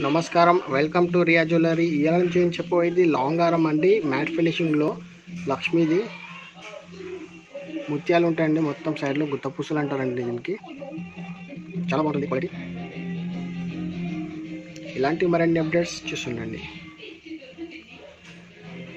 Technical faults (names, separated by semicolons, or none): time-stretched section